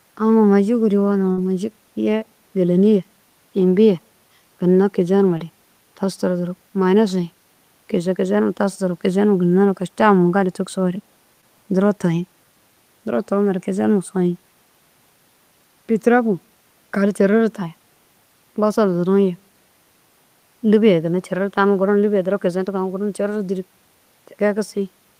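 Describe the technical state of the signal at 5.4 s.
At 5.37 to 5.41 s there is short concealed packet loss: about 20 ms of speech failed to arrive and the decoder extended the preceding sound to fill it before fading back. It heard as a brief smear or wobble; a spectrogram shows the preceding sound continued across the gap.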